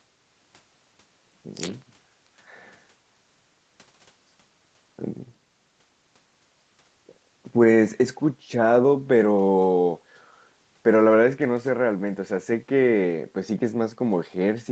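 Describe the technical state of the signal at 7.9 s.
At 7.9 s the speech is intact, with no dropout, glitch or distortion; the sound simply carries the call path's normal band limit, with nothing above about 8 kHz.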